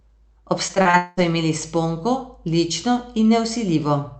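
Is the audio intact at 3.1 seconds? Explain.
Yes, the speech at 3.1 seconds is intact, with only the ordinary coding of the call path audible and no fault at that moment.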